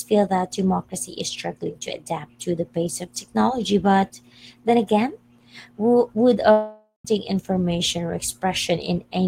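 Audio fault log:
6.51 to 7.05 s, long network dropout: about 0.54 s of speech is lost. The last sound is stretched into a fading buzz, with about 0.14 s of silence, likely because packets stopped arriving. Speech resumes past the missing part.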